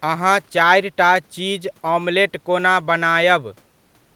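No technical faults can be heard anywhere in the recording. The room's background noise sits about 40 dB below the speech, as part of the space where the microphone was placed.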